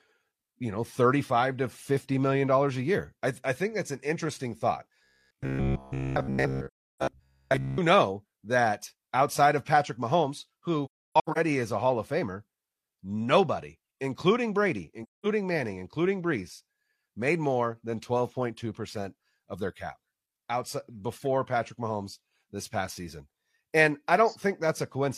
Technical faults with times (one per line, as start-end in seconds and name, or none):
5.04-7.78 robotic sound from repeated short buffers
6.67-7.02 AAC frame loss with muting
10.85-11.38 AAC frame loss with muting
15.03-15.26 AAC frame loss with muting